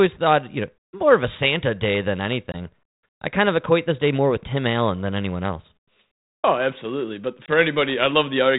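It's a speech clip over what sounds like 32 kbit/s ADPCM, with packet loss on the ADPCM call at 2.52 to 2.55 s and 7.46 to 7.49 s. Each is a hard-edged gap of about 20 ms, about one packet. The decoder's predictor and step size drift from the sender's, so speech comes back briefly distorted before settling.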